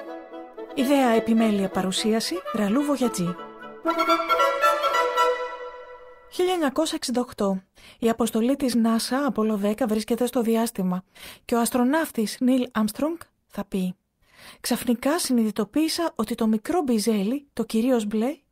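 From 8.03 to 9.09 s there are scattered short gaps. About seven small holes fall in this stretch, none longer than roughly 15 ms. The receiver filled each by extending the preceding sound. The audio stays clear but carries brief ticks and tiny hiccups.

A jitter buffer slow-down follows from 9.83 to 10.52 s. The buffer was short of reserve, so the receiver repeated small pieces of the signal to stretch it. The pitch holds but playback drops to 93% speed, adding 51 ms. Sounds feel slightly drawn out.

At 12.59 to 12.87 s a jitter buffer speed-up occurs. Too much audio had built up, so the receiver cut short pieces to trim the delay, removing roughly 40 ms. Playback runs at 112% speed with pitch unchanged. The passage sounds briefly hurried.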